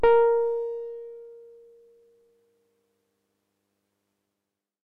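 A recording of sounds, and no technical fault can be heard anywhere in it. There is nothing in the audio that calls for a time or a cause to be noted.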